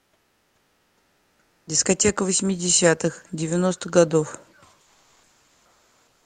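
From the start to 1.67 s, comfort noise replaces the background. The real room sound gives way to a steady, featureless hiss about 12 dB quieter. The likely cause is Opus discontinuous transmission: the sender paused during silence and the receiver synthesized noise. On a spectrogram it shows as a smooth, uniform wash. Between 4.83 s and the end, the same substitution returns, this time only about 1 dB below the real background.

From 2.17 s to 4.4 s, automatic gain rising lifts everything by about 4 dB. The control judged the input too quiet and raised the gain gradually, so sound and background swell together. The waveform envelope widens steadily across that span, with no step.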